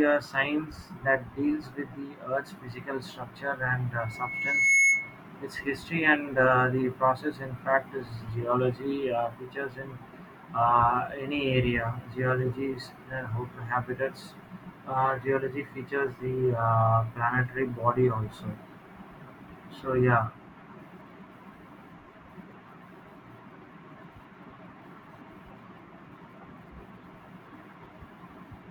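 From 3.99 to 5.19 s, loudspeaker feedback squeal: the microphone-speaker loop rings at 2.2 kHz and swells within a second to about 10 dB over the speech, showing as a bright horizontal spectrogram line.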